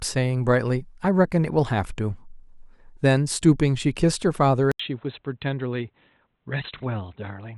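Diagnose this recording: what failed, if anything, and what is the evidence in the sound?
At 4.72 s the speech goes silent for 80 ms, then returns duller and boxier until the end. Nothing remains above 4.1 kHz, the level drops slightly, and a faint new noise floor appears. At the driver stage, the input likely switched to a poorer device.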